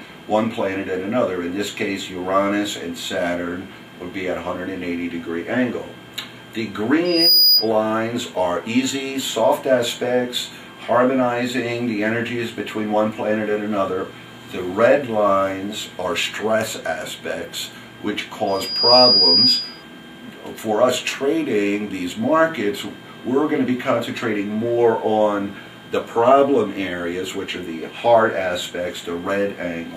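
Loudspeaker feedback squeal appears twice, at 7.05 to 7.69 s and at 18.47 to 19.83 s, both times on the same 4.9 kHz tone. A microphone is picking up its own loudspeaker, so the loop gain at that frequency exceeds one. The tone swells over roughly 0.3 to 0.4 s until it sits about 10 dB above the audio. That build-up and the repeated pitch distinguish it from a steady whistle or a tone added afterwards.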